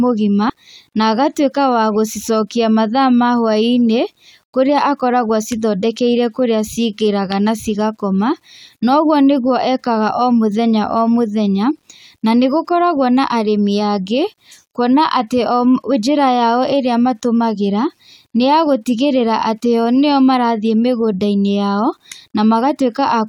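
Low bit depth without dither runs through the whole clip, from start to finish: a grainy, signal-following distortion sits on the speech, roughest on quiet syllables and trailing word endings, where sounds break up or sputter before dropping to silence. The likely cause is the audio being rounded to about 10 bits with no dither, so the error moves with the signal instead of forming steady hiss, and the grit sits roughly 50 dB below the speech.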